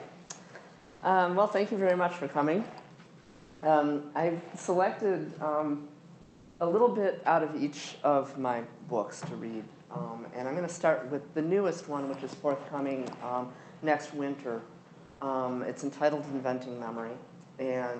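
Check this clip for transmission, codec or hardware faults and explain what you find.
The clip has three short stretches of comfort noise in place of the background, at 0.77 to 1.01 s (240 ms), 3.21 to 3.61 s (400 ms) and 15.05 to 15.19 s (140 ms). In each pause the quiet background, about 27 to 31 dB below the loud parts, gives way to a flat, smooth hiss with no texture. The cause is likely discontinuous transmission in the Opus codec: the sender stops transmitting during pauses, and the receiver fills the gap with synthetic noise roughly matched to the background's spectrum. The first patch drops by about 3 dB, the last by about 2 dB, and the middle one keeps the same level, so there it is the loss of detail rather than loudness that gives it away. Unlike a dropout or a noise gate, which would leave near-silence, these pauses stay filled with steady noise. The call path itself carries audio up to about 8 kHz.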